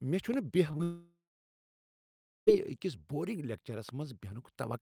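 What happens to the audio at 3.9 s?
At 3.89 to 3.91 s a single loud pop lands on top of the speech, peaking a few decibels above it. The likely cause is a brief voltage pulse, from static, a switch or a driver glitch, entering the signal path and being shaped into a short thump. Unlike a dropout or an edit glitch, nothing is removed: the speech carries on unbroken underneath, and the event is one isolated burst, not a repeating crackle.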